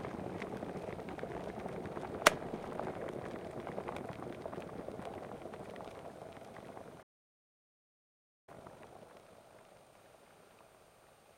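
A playback stall runs from 7.02 to 8.49 s: the sound cuts off mid-flow and the output stays silent for about 1.45 s. The likely cause is that the player ran dry of buffered data, or its thread was held up, so nothing reached the output until it recovered.

Time-compressed catch-up follows from 8.49 to 9.93 s, as the player works off the backlog left by the stall at twice normal speed. It drops short slices and cross-fades the joins, so the sound rushes by at its normal pitch.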